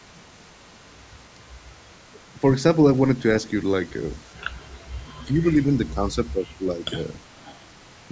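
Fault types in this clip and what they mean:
Speech suppressed in double talk: From 5.26 to 6.93 s the speech dips by around 10 dB in pieces, about a second in total. Both sides seem to talk at once here. The echo canceller likely could not tell this talker from the far-end echo, so it pulled both down.
Echo leak: From 7.35 to 7.71 s a faint delayed copy of the speech comes back, roughly 30 dB below it and 402 ms late. This is likely loudspeaker sound that an echo canceller failed to remove before sending it back.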